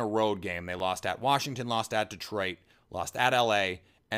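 Speech with a repeated buffer at 0.79 s and 3.14 s: a brief click where one piece of about 12 ms, fitting a 512-sample buffer, plays twice. The waveform shows an identical repeated segment with hard joins, and the spectrogram shows a thin vertical line at each.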